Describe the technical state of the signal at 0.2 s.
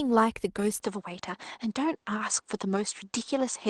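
The audio is intact at 0.2 s, with no fault in the speech signal at that moment.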